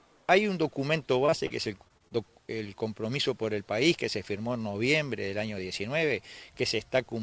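Short concealed packet loss: roughly 20 to 40 ms of audio at a time arrived too late to decode, at 1.26–1.30, 1.30–1.34, 1.46–1.52, 1.88–1.92, 1.98–2.17 and 2.08–2.12 s. The receiver extended the preceding sound across each gap and blended back, leaving brief smears or wobbles clustered between 1.26 and 2.17 s. Over the call path, nothing is heard above 8 kHz, which fits a G.722 wideband codec.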